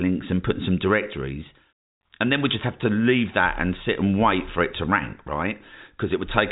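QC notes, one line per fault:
No faults found; the speech carries the narrow band of ordinary telephone coding, nothing above 3.8 kHz, consistent with a 64 kbps G.711 mu-law path working as normal.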